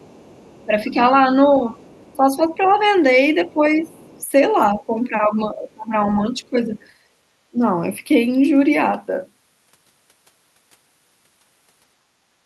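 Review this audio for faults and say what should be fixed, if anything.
Other side's voice leaking through at 0.00–0.66 s, 1.75–4.25 s and 6.43–6.87 s, a faint second voice roughly 30 to 40 dB under the talker, likely loudspeaker echo the canceller missed. Better echo cancellation or a headset would stop it.

Speech suppressed in double talk at 0.66–1.31 s, 2.13–2.75 s, 3.49–6.74 s and 7.49–7.62 s, with the talker ducking a few dB early and up to about 25 dB later, likely the canceller clamping down while both sides overlapped. A headset, or a canceller that handles double talk better, would prevent this.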